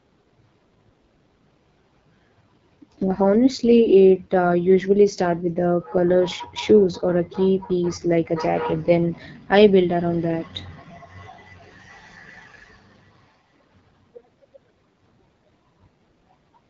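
Throughout the speech, the AMR wideband (HD Voice) codec is plainly audible as a rough, raspy coarseness, which fits one of its lowest modes, around 8.85 kbit/s. Nothing sounds above 7.5 kHz, and the top band is hissy rather than detailed, which separates it from a plain low-pass filter or narrowband telephone audio.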